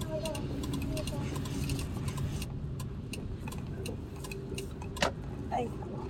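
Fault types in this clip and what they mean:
Doubled audio track: from the start until 2.44 s, each sound returns about 0.7 s later at roughly equal loudness, likely a second capture through a slower path. Unlike an echo or reverb, the copy is full-band, never decays and stops abruptly.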